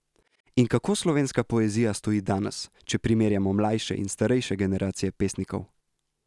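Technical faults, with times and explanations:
No technical faults found in this speech recording.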